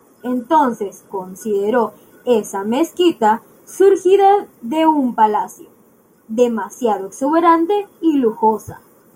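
No technical faults can be heard anywhere in the speech.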